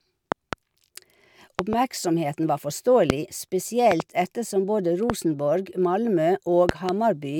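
Loud pops at 0.32–0.55 s, 1.59–1.75 s, 3.10–3.12 s, 3.92–4.02 s (just before "ettersom både"), 5.10–5.12 s (just after "ettersom både") and 6.69–6.91 s. These are likely voltage spikes from a plug, switch or static. Each is a sharp thump, single at 3.10 and 5.10 s and a quick double at the others, about 20 dB above the speech, which carries on underneath.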